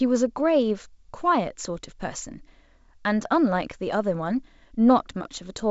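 The speech comes through a G.722 wideband telephone path at 64 kbit/s, with its band ending near 7.7 kHz and no fault audible anywhere in the clip.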